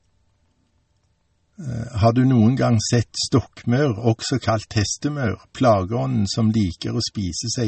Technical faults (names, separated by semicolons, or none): MP3 compression